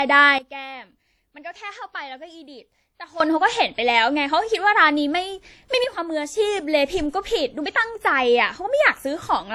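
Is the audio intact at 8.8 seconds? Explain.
No. At 8.8 s, as across the whole speech clip, the sound carries transcoding between lossy codecs, likely a WMA-type encode re-encoded as HE-AAC, fitting about 48 kbit/s each. The second codec wastes bits on the first one's artefacts and adds its own, so both sets of artefacts are heard together and the lowest cut-off in the chain stays. A spectrogram shows a hard high-frequency ceiling and blotchy, patchy upper bands.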